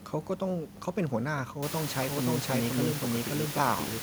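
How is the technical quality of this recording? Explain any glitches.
The recording has one clear fault. The room noise jumps by about 24 dB near 1.5 s and stays about 11 dB below the speech.

From 2.02 s to the end, there is a doubled audio track. A second full-band copy follows about half a second behind, roughly as loud as the original. It has no decay or room colour. It starts abruptly. Likely an edit or a slower capture path mixed in a duplicate.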